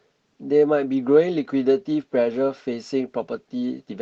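No technical faults can be heard in the speech, which has passed through a call path whose codec rolls off the top end at about 8 kHz, consistent with Opus running at a modest bitrate of around 24 kbps.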